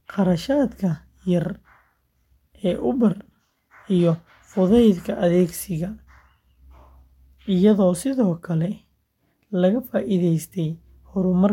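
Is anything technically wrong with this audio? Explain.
No, nothing technically wrong can be heard in this speech recording. There is nothing here that calls for a technical explanation.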